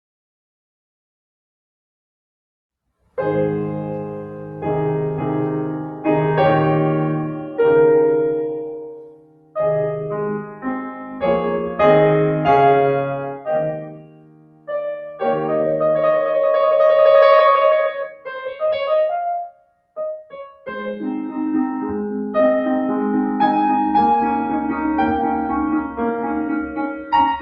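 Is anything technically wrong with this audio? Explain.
Yes, there are two related problems.

Noise suppressor applied to music or sounds, throughout: a speech-tuned suppressor treats sustained music as noise, so the level swings by roughly 10 dB and pumps and thins. This is heard over a call codec whose top end stops near 12 kHz, which fits Opus at around 48 kbps.

Sound cut by the noise suppressor, at 8.66–9.56 s (about 21 dB down), 10.42–10.65 s (about 10 dB), 10.91–11.23 s (about 8 dB), 13.31–13.49 s (about 14 dB), 13.71–14.7 s (about 21 dB), 18.05–18.9 s (about 20 dB), 19.44–20.94 s (about 21 dB) and 26.66–27.12 s (about 11 dB). In each of these stretches the suppressor misjudged held or decaying sound as noise, so the sound sinks sharply or its tail is chopped.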